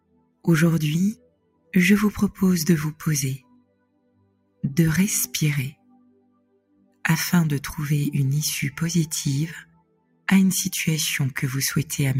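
A noise suppressor meant for speech stays on throughout and treats steady sound as noise, so the level swings by roughly 20 dB and the sound pumps and thins. The sound is cut by the noise suppressor at 0.0 to 0.47 s, 1.15 to 1.73 s, 3.38 to 4.64 s, 5.72 to 7.04 s and 9.64 to 10.27 s, where held or fading sound sinks by about 21 dB and its decay is clipped short.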